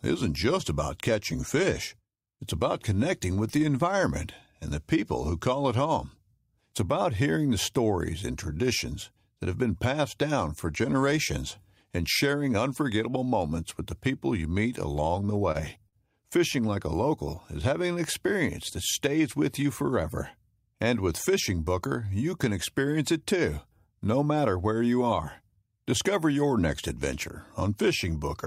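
Just after "the people you meet", from 14.93 to 15.95 s, the speech shows repeated stalls (stutter). Packets arrived late, draining the jitter buffer five times; each gap, the longest 42 ms, was bridged by extending the last sound. Nothing is lost, but delivery drags and stutters.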